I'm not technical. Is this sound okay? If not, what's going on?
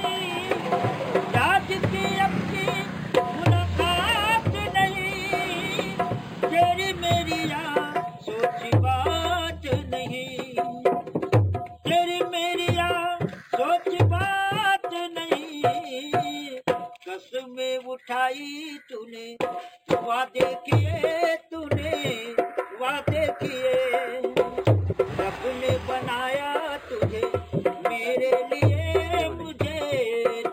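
No. There's imaging from linear upsampling the whole way through. A low-quality copy was crudely stretched up, so the top sounds dull, with a faint metallic shimmer on hissy sounds.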